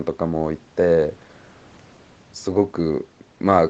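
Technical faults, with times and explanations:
No technical faults are present in this speech; its content stops at 8 kHz, as expected from the call's microphone processing and the Opus codec of the WebRTC call path, and the codec's usual coding noise is part of the signal.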